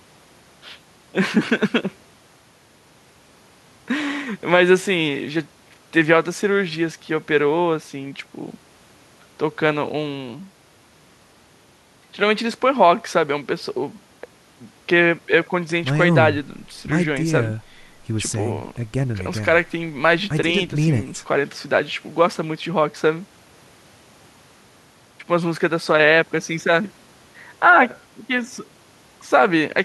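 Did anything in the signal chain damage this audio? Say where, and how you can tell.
No, nothing in the signal chain damaged this audio.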